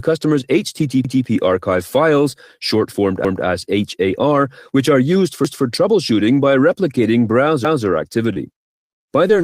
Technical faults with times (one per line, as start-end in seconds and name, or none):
1.05-1.25 overlapping chunks
3.25-3.45 overlapping chunks
5.45-5.65 overlapping chunks
7.65-7.85 overlapping chunks
8.33-9.44 repeated packet loss (robotic sound)